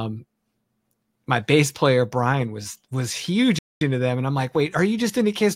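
At 3.59 s, right after "was was huge", the speech cuts out for about 224 ms until 3.81 s, then resumes at "into them and I'm". This playback stall likely came from the player starving for data. The waveform shows a flat gap, and the spectrogram a blank vertical band.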